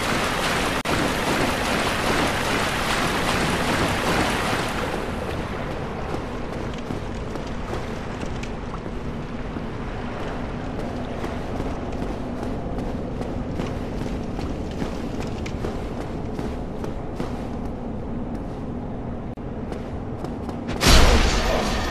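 Gap at a join of encoded pieces, at 0.81 s (about 38 ms) and 19.34 s (about 34 ms): the sound drops into brief silence with smeared edges, then resumes where it stopped, because separately encoded pieces were joined with their encoder start delay and final-frame padding left untrimmed.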